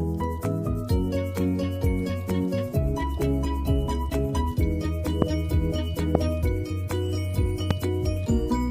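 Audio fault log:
5.22–5.24 s, 6.15–6.17 s, 7.71–7.73 s: loud pop. Each is a single sharp pop lasting about 20 ms, rising about 20 dB, 20 dB and 15 dB over the sound, which continues beneath. The likely cause is a voltage pulse from a switch, plug or static.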